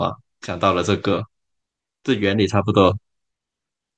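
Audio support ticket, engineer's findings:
Listened through the speech clip a couple of times and found nothing to flag, so no findings to log on this one.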